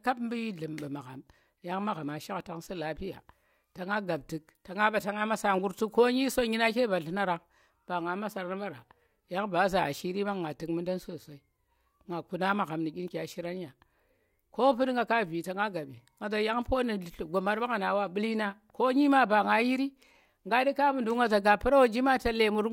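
No faults turn up anywhere in this speech recording, so there's nothing here to pin down or explain.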